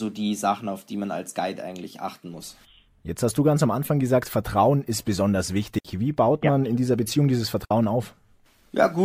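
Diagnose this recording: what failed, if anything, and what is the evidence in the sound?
The digital wireless link failed twice; each digital wireless dropout left the receiver short of data, so it muted with a very fast fade. The speech falls into clean near silence for 62 ms at 5.79 s, just after "ist besonders", and 60 ms at 7.65 s, with no noise burst around either gap.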